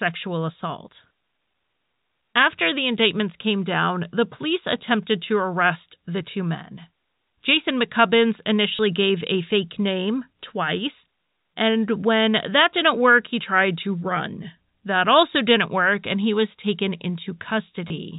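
A speech recording carried over G.711 telephone coding, with its narrow band capped near 4 kHz, breaks into two brief robotic stutters: a buzz from 8.76 to 8.79 s (30 ms) and a shorter one from 17.88 to 17.90 s (20 ms). Both are packet loss with the last packet repeated. Audio went missing, and the receiver looped the last chunk it had until fresh data arrived. The loop ignores the pitch period, and the length and spacing suggest roughly 10 ms packets.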